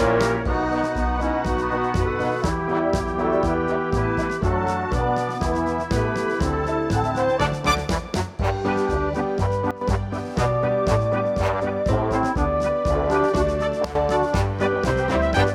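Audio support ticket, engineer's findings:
Sudden gain jump at 9.71 to 9.81 s and 13.85 to 13.95 s. Level drops abruptly, about 11 dB then about 12 dB, with the noise floor falling in step with the sound; each dip lasts roughly 0.1 s before recovery. Likely cause: digital gain stage or bit shift applied sample-to-sample with no ramp, so the whole signal, noise included, is scaled at once.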